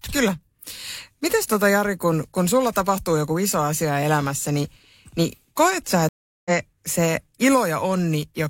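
At 6.09 s, after "niin niin koet sä", a stream reconnect flattens the waveform for 367 ms, leaving a blank spectrogram gap, and speech then resumes roughly 0.3 s later.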